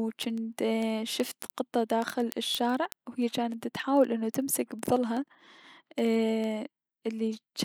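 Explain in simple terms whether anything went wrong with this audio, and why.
Two pieces of digital equipment were running on separate clocks, disagreeing by roughly 300 parts per million. That mismatch causes word clock ticks: a sharp tick of uneven strength about every 70 milliseconds, around a hundred of them, throughout the speech from 0.15 to 7.64 seconds.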